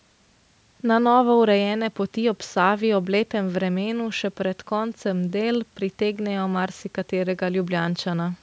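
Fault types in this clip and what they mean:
No faults can be heard anywhere in this speech.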